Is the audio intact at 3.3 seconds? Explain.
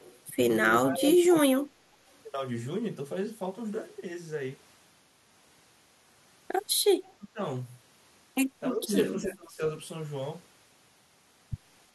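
Yes, at 3.3 seconds the speech is intact, with no audible fault at that moment.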